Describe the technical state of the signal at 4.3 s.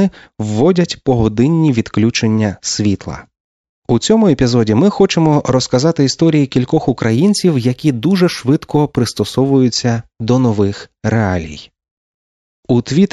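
At 4.3 s the speech signal is intact, with no dropout, clipping, glitch or other technical fault at that moment.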